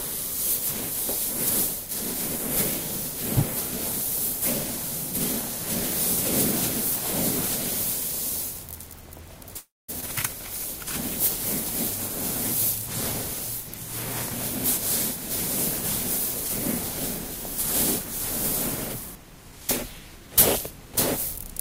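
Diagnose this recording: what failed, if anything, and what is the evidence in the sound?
A call audio freeze sits at 9.57 to 9.90 s. The last sound is stretched into a fading buzz that falls to silence for about 0.23 s before audio resumes with nothing lost. The likely cause is a network stall that emptied the jitter buffer. On a spectrogram it shows as smeared, decaying bands, then a blank column.

A skip ahead follows at 10.00 to 10.04 s. Roughly a fifth of a second of audio is dropped, and the two sides are joined by a 16 ms patch. This is network or jitter-buffer loss while later packets were already queued. The waveform shows an abrupt splice with a visible discontinuity in envelope.

A jitter buffer speed-up runs from 19.00 to 20.28 s. The audio plays about 7% fast at unchanged pitch, with around a tenth of a second trimmed out in small pitch-period cuts to shed excess buffered delay. 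The spectrogram keeps harmonic spacing but events arrive compressed in time.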